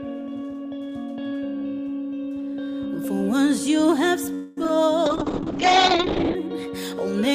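At 4.34 s the sound stops moving forward and the last moment is stretched into a fading, buzzy continuation that lasts until 4.58 s, roughly 0.23 s, with no true silence. This is a call audio freeze, most likely caused by packets held up in transit until the jitter buffer ran dry. Unlike a dropout, nothing is skipped. When the audio resumes it picks up exactly where it left off, so everything after it runs about 225 ms later than before.

Right after it, two short concealed packet losses land at 4.64 s and 4.68 s. Each time, about 10 ms of audio failed to reach the decoder in time, and the receiver bridged the hole by extending the preceding sound before blending back in. They come across as tiny smears or wobbles. What separates them from the freeze is that they are far too short to stretch into a buzz, and here the original material is actually lost rather than delayed.

From 5.06 s to 6.42 s a call bitrate drop takes the encoder from 64 kbps down to 8 kbps, where it stays for about 1.3 s. 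The audio turns coarse and watery, and the top end is cut from about 20 kHz to about 8 kHz, which makes it sound muffled. Unlike the two events before it, nothing stalls or glitches. The sound keeps flowing, just degraded in quality, until the rate recovers.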